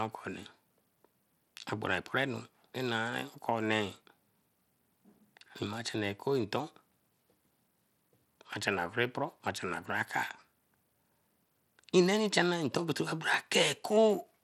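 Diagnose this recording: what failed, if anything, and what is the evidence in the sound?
The codec stage failed: the audio was most likely passed through Bluetooth SBC compression with too small a bit pool. The damage is plainly audible for the whole clip. A gritty, grainy noise rides on the speech and the upper treble flickers in and out, with nothing at all above 19.4 kHz. SBC splits the signal into a few wide sub-bands and allocates bits without a hearing model. At a low rate, which fits about 96 kbps, the weaker top bands get starved of bits. The remaining bands are coarsely quantised, which leaves that noise and aliasing.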